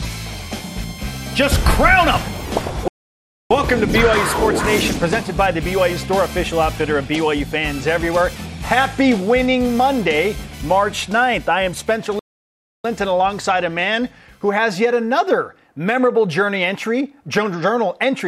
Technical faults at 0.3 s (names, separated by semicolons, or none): none